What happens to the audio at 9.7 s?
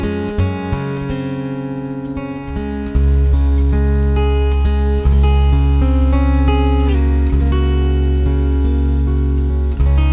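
Nothing goes wrong at 9.7 s: the audio plays through intact, carrying the same narrow, telephone-like band that tops out around 4 kHz, which fits an ordinary G.711 call path.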